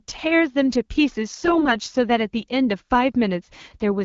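From 1.37 to 1.74 s the speech turns hoarse and gargly. Those are AMR bit errors: flipped low-priority bits, around 5 percent, slipped past the checksum, scrambling pulse positions and fine gain and spectrum values, while the clean wideband coding around it fits AMR-WB near 12.65 kbit/s.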